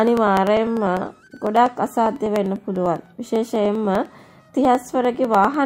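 A steady train of ticks runs through the audio from 0.07 s to 5.54 s, repeating every 0.0995 s, about ten per second, and audible only where there is signal. These are periodic USB or driver dropouts: something stalls the audio path on a fixed cycle, and around fifty times a fragment of roughly half a millisecond is skipped outright, leaving a tiny discontinuity at each join.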